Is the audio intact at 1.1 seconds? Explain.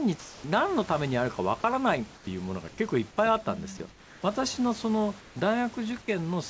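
Yes, the audio is intact at 1.1 seconds, with nothing there beyond the ordinary band limit of the G.722 call path, which leaves nothing above 8 kHz, and the low room noise sitting about 24 dB under the speech.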